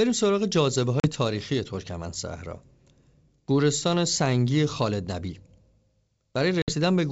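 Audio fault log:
1.0–1.08 s and 6.62–6.74 s, packet loss on an ADPCM call: two hard-edged silent gaps of about 40 ms and 60 ms, consistent with about two and three lost 20 ms packets respectively. The decoder filled the gaps with silence but could not recover the sender's adaptive predictor and step-size state. Speech therefore returns slightly distorted before settling over the remainder of each span. The clip's G.722 wideband coding at 64 kbit/s is clean around these gaps.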